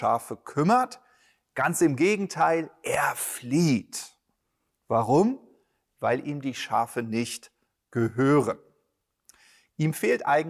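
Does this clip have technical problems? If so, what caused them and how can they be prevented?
No, nothing in this speech clip calls for a fix, so there is no cause to trace and nothing to prevent.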